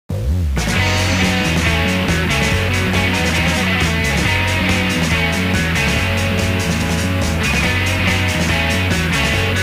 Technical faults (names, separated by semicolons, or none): low bit depth without dither